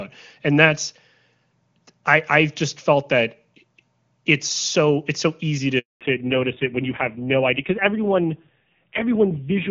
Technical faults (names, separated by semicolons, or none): handover gap; fallback to narrowband